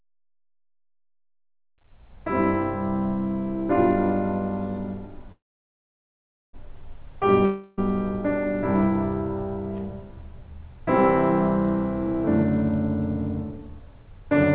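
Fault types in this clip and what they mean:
call audio freeze: a brief buzz fading to about 1.2 s of silence from 5.32 s, then the music resumes intact; likely packets held up and an emptied jitter buffer.
long network dropout: a fading buzz at 7.45 s filling about 0.32 s, and the music returns with that stretch missing, a likely network loss.
jitter buffer speed-up: from 13.69 to 14.44 s the music rushes at 115% speed, same pitch, losing steady tempo as the receiver trims short pitch-period pieces.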